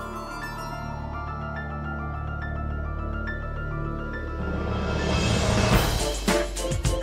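No faults can be heard in this clip.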